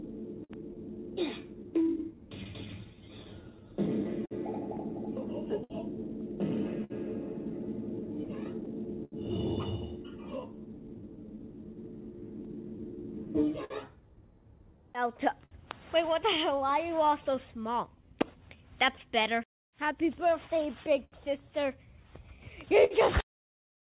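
Audio carried over a narrowband call path, with nothing above 4 kHz and the grainy coding texture of what sounds like G.711 mu-law at 64 kbps, shows clock drift between sender and receiver across the whole clip. The sender's clock runs slow by roughly 5 percent relative to the receiver's, so the receiver's jitter buffer keeps draining and must be topped up. The result is a steady background of small timing irregularities rather than any single obvious event.

The repeated timing corrections run from 0.21 s to 22.38 s. The receiver stretches the audio by inserting short repeated slices, all in the same lengthening direction but at uneven spacing, so playback runs at 98 percent speed. Somewhere around 400 ms is added in total. Individually the edits are slight.

Scattered short gaps occur in two stretches, 0.04 s to 9.14 s and 12.45 s to 22.93 s. Each stretch holds about twenty brief dropouts, the longest around 70 ms, covering roughly 5 percent of the span in the first and 4 percent in the second. 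Each hole is patched by extending the preceding sound, so nothing drops to silence. Instead there are brief smears and ticks where the concealment fills in.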